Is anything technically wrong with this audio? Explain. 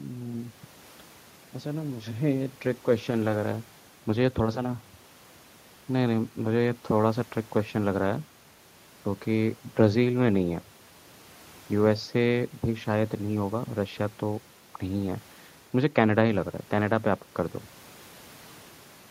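No, nothing technically wrong turns up in this speech recording, so there's nothing here to flag or explain.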